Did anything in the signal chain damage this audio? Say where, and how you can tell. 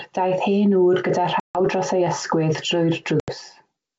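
Yes: packet loss on an ADPCM call, network stage. Hard-edged gaps at 1.40 s (about 150 ms, roughly fifteen packets) and 3.20 s (80 ms) leave the decoder's predictor mismatched, so speech returns slightly distorted.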